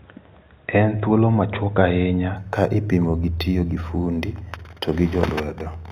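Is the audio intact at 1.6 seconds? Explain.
Yes, the speech at 1.6 s is intact, with no dropout, click, distortion or other fault at that moment.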